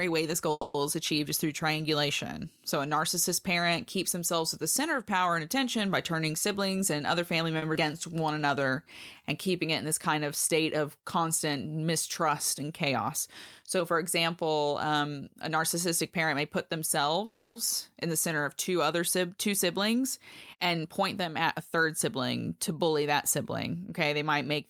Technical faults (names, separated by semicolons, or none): call audio freeze; jitter buffer speed-up; short stall from a late packet; skip ahead; jitter buffer slow-down